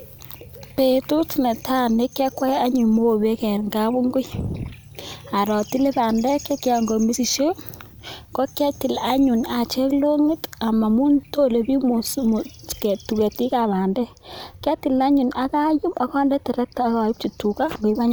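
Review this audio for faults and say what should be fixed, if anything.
From 13.60 to 17.95 s the speech turns dull and muffled: de-emphasis applied wrongly, a treble cut meant to undo pre-emphasis landing on audio that never had it or applied a second time. The top end slopes smoothly away, about 8 dB down at 10 kHz relative to 1 kHz. A spectrogram shows the upper bands fading evenly across that stretch; the waveform looks rounder, with fewer sharp peaks. Prevent it by tracking whether pre-emphasis was actually applied and enabling de-emphasis only on material flagged as pre-emphasised.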